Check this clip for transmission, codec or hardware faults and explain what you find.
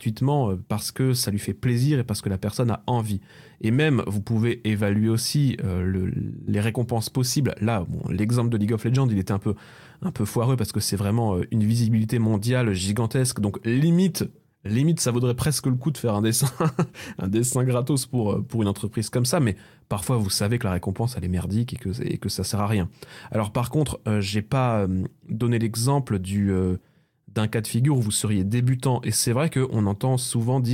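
No faults detected in this recording.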